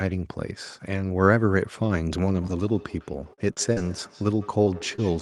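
From 2.33 s to the end there's feedback echo between two devices: a second device replays this one's output into the microphone, so the speech comes back roughly every 150 ms, about 20 dB down.

Over that you get short concealed packet loss at 3.33, 3.53, 3.73, 4.64, 4.78 and 4.96 s, gaps of 20 to 40 ms papered over by the decoder, heard as brief smears or wobbles.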